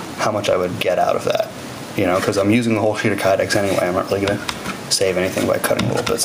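Gain pumping runs through the whole recording. The gain swells up in each gap, then ducks under every loud sound, swinging by around 10 dB. Loud and soft parts sit too close in level. The likely cause is gain set far too high, with a fast limiter clamping down.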